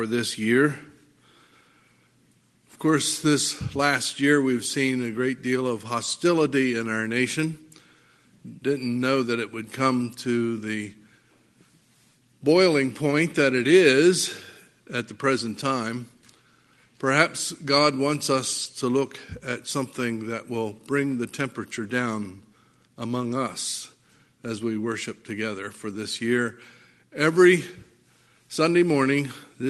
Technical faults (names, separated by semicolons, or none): short concealed packet loss